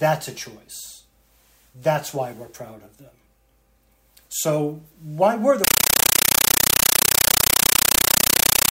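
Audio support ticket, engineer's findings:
Loud chattering static replaces the sound from 5.64 s to end of clip. 9.3 ms noise bursts repeating 31.25 times per second, silent gaps between. Compressed stream played as audio: Dolby Digital bitstream on S/PDIF/HDMI link treated as PCM, not decoded.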